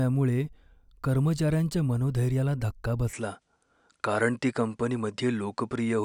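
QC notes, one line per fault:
3.13–6.05 s, input switched to a poorer device. From 3.13 s the speech loses its top end, with nothing above 10.5 kHz. There is no gap and no level jump. A faint new noise floor sits far below the speech. This points to a likely change to a narrower-band microphone.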